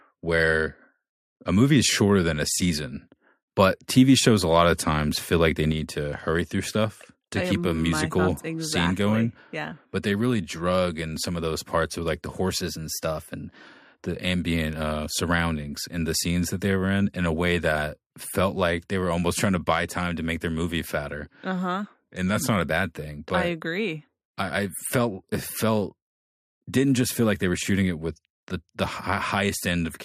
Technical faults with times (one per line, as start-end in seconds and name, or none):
5.72-30.05 sudden gain jump
12.61-13.64 drift correction step
21.85-22.61 drift correction step